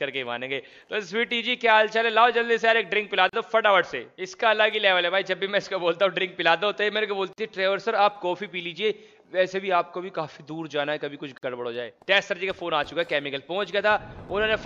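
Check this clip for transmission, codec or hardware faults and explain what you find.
Three short silences break the sound at regular 4-second intervals, each a gap at a join of encoded pieces. They occur at 3.29 to 3.33 s (about 37 ms), 7.33 to 7.38 s (49 ms), and 11.38 to 11.43 s (49 ms). Each join keeps the encoder's start delay and last-frame padding. The smeared edges, strict spacing, and seamless resumption distinguish these gaps from random packet-loss dropouts.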